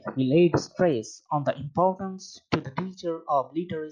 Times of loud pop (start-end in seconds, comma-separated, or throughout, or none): none